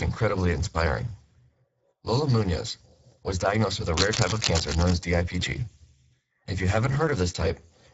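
From the start the speech carries Speex codec damage: hoarse and noisy, consistent with roughly 10 kbps, with spectrogram energy ending at 7.7 kHz and a smeared, noise-like upper band.

At 3.94 s, right after "was diagnosed with a", cable scratch noise runs until 4.96 s. It is a dense, uneven scratching burst only slightly quieter than the speech, likely from a worn cable or connector being moved. On the waveform and spectrogram it shows as ragged broadband spikes.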